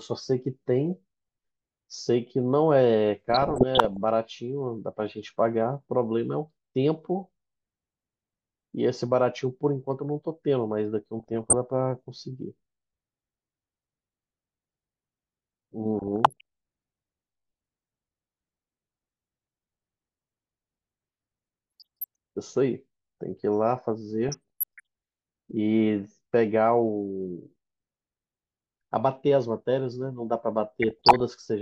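Speech, with DAB burbling at 3.29–3.97, 11.17–11.54, 15.99–16.41, 21.80–22.04, 24.23–24.80 and 30.82–31.21 s. Weak reception lets bit errors corrupt sub-band levels. The result is short blips of noise and jumps in level in single sub-bands.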